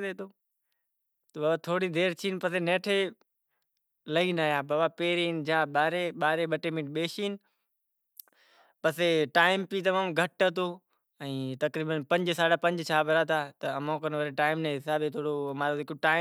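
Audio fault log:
No technical faults are present anywhere in the speech recording, and the signal holds steady throughout.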